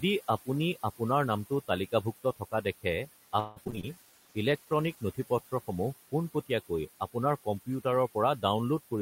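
A speech recording with noise suppressor artifacts throughout: the suppressor pulls the background down by about 14 dB, so the room noise, which sits about 16 dB below the voice, pumps between phrases and rises again under the speech. From 2.24 to 2.66 s the suppressor misreads part of the speech as noise and cuts it, dipping by up to about 16 dB. Roughly a tenth of a second of soft sound is swallowed, so those parts come through faint. Between 3.39 and 3.85 s there is repeated packet loss with a robotic sound. Several holes in quick succession are patched by extending the preceding audio, so about half of that stretch is synthetic fill. The longest hole is 169 ms, and around 100 ms is simply missing, which leaves the passage choppy. A call bitrate drop follows from 3.94 to 5.13 s, when the sender's bandwidth estimate collapses. The coding turns coarse and muffled for just over a second, with high frequencies lost, consistent with Opus falling from about 40 to 16 kbps. 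Overlapping its start, a jitter buffer slow-down from 3.95 to 4.13 s stretches that audio by 40 ms, running it at 82% speed without a pitch change. The receiver is rebuilding its reserve by repeating pitch periods, which makes the sound drawn out.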